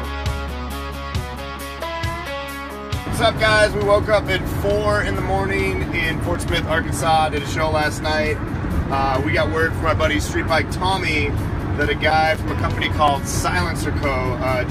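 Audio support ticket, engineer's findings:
CD scratch ticks, 5.62–7.32 s and 11.62–13.32 s: eight ticks each, about five a second, of uneven strength. Disc surface damage defeats error correction once per revolution, so the player interpolates or mutes. The steady spacing rules out random clicks. Ticks run from a couple of ms in the first burst to several ms in the second.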